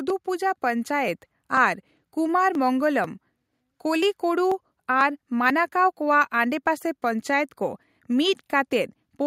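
Speech, with an automatic gain rising fault at the start: from 0.24 s to 1.26 s the level climbs by about 4 dB as the gain control, having judged the input too quiet, raises its gain gradually over roughly a second. Voice and background noise swell together, which is the giveaway. On a waveform the envelope widens steadily across that span, and a spectrogram shows every band, including the noise floor, brightening evenly at once.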